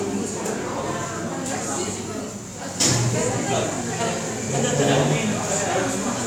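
No technical faults can be heard anywhere in this audio.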